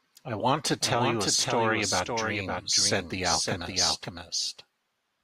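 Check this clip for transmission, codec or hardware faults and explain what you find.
One fault runs through the whole clip. A doubled audio track: a full-band copy of the speech trails about half a second behind, roughly 5 dB quieter, likely from a second, slower capture path.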